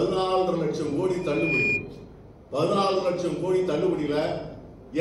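From 1.21 s a single 2.4 kHz tone swells over roughly a third of a second to about 5 dB above the audio, ending at 1.87 s. This is loudspeaker feedback squeal: a microphone picked up its own loudspeaker, and loop gain above one at 2.4 kHz made that frequency build on itself.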